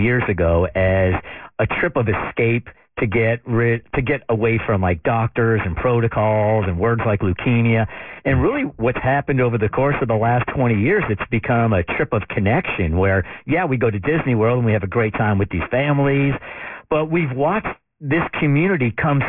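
Aliasing runs through the whole speech clip. Content above 3 kHz folds back into the band, which fits a drop to a 6 kHz rate without an anti-alias filter. Sibilants turn gritty and metallic, with spurious tones roughly 15 dB below the speech.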